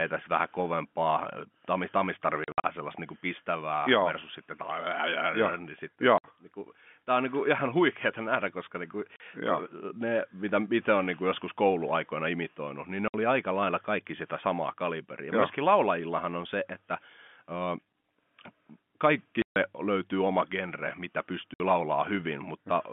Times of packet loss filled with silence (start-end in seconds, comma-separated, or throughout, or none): 2.44-2.64, 6.18-6.24, 9.16-9.20, 13.08-13.14, 19.42-19.56, 21.54-21.60